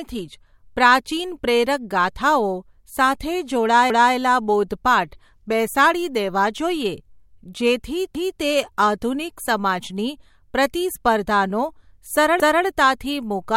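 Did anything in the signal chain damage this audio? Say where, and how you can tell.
Yes. The damage happened at the buffering stage, where the speech was handled in fixed blocks and reassembled with overlapping chunks. At 12.4 s a 250 ms stretch plays twice, running to 12.65 s, so the sound jumps back and repeats before continuing. The block length points to chunks of about 4 s, with each new chunk starting a quarter-second before the previous one ended. Unlike a dropout or a lost packet, nothing is missing here. The audio is duplicated.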